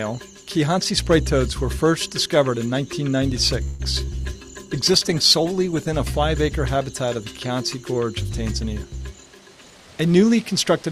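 At 3.63 s there's a 0.18 s stretch where the last sound hangs on and fades, a call audio freeze, likely from packets held up so the jitter buffer ran dry. At 4.05 s comes a short concealed packet loss: about 20 ms never arrived and got patched over, leaving a quick smear. From 4.12 s to 5.97 s a call bitrate drop takes the encoder from 64 to 19 kbps, so the sound goes rough and dull for a bit under two seconds. Then from 8.96 s to 10.24 s a jitter buffer speed-up trims around 150 ms of backlog, and the audio runs about 12% fast at unchanged pitch, sounding hurried.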